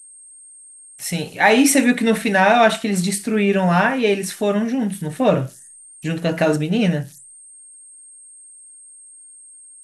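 A high whistle, somewhere around 10 kHz, hangs over this speech recording from start to finish, with grainy hiss under the quieter passages, about 28 dB below the speech. These are converter idle tones: an undithered delta-sigma converter cycling through repeating bit patterns on low-level input.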